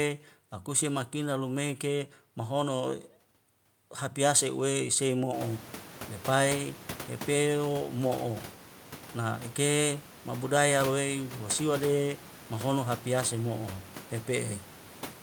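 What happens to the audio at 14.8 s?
At 14.8 s the audio is intact, with only the room's own background noise sitting about 18 dB below the speech, which is part of the recording rather than a fault.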